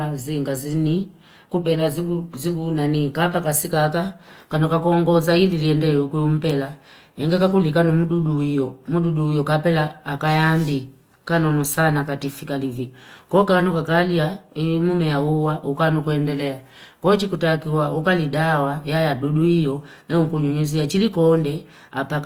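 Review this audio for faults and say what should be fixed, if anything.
The encoder was likely starved of bits: the whole recording carries plainly audible Opus compression damage, and the grainy texture fits Opus's music-oriented CELT mode at a rate around 24 kbps. With too few bits for fine detail, the encoder keeps each band's energy but refills the content with folded copies of lower bands or with noise, so the speech sounds rough and sandy. The band stays full-width, reaching about 20.3 kHz. To prevent this, encode from the original source at a higher Opus bitrate, or use the encoder's voice setting, so the bands carry real detail.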